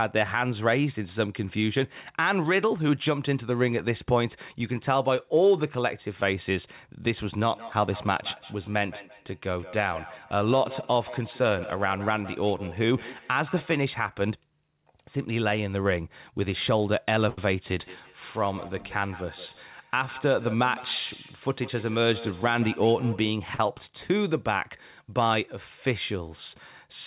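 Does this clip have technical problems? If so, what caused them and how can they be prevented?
Yes. Feedback echo between two devices runs from 7.39 to 13.85 s and again from 17.69 to 23.38 s. The sound returns roughly every 150 ms, thinner and more ringing each pass, peaking about 16 dB below the direct speech. Two devices in the same room were on the call. One played the other's audio aloud, and that microphone picked it up again. Each echo canceller only removes its own device's playback, so the loop kept circulating. To prevent it, mute one device's microphone and speaker, or have everyone in the room use headphones.

A short stall from a late packet occurs at 17.29 to 17.38 s, where the sound is held for 83 ms, and at 23.55 to 23.60 s, held for 36 ms, each with a slight buzz or dip. A packet arrived late, the jitter buffer ran dry, and the receiver stretched the last sound until the packet came. 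It then resumed from the same place, so nothing is lost, but the timing hitches. A steadier, wired network connection with less competing traffic prevents this.

A jitter buffer speed-up runs from 19.93 to 20.64 s. The speech plays about 106% fast at unchanged pitch, which sounds slightly hurried. The buffer held more than its target. To cut the delay, the receiver trimmed many pitch-period slices, about 50 ms in total. Reducing network jitter keeps the buffer near its target so it has no need to catch up.

The call path band-limits everything to below 4 kHz, which fits G.711 A-law at 64 kbps.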